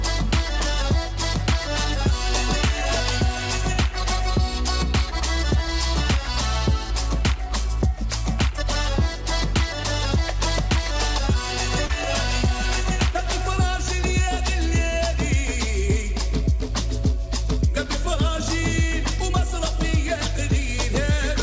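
Short concealed packet loss at 11.86 to 11.91 s: about 40 ms of audio arrived too late, and the receiver filled roughly 33 ms by extending the preceding sound, leaving a brief smear. The call path's G.722 coding leaves nothing above 8 kHz.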